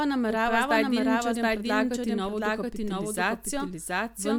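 Speech with a doubled audio track throughout: a full-level, dry copy trails the original by roughly 0.7 s, likely from a second, slower capture path mixed in.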